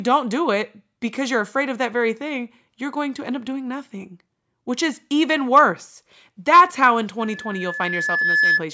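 After "how in", loudspeaker feedback squeal runs from 7.20 to 8.65 s. The microphone picks up its own loudspeaker. A 1.7 kHz tone swells to about 5 dB above the speech.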